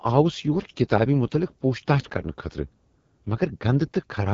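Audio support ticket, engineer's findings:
AMR wideband (HD Voice) codec throughout: rough, raspy speech, fits the 8.85 kbit/s mode. Spectrogram shows smeared harmonics, shaped noise fill near 6.4 to 7 kHz, nothing above 7.5 kHz.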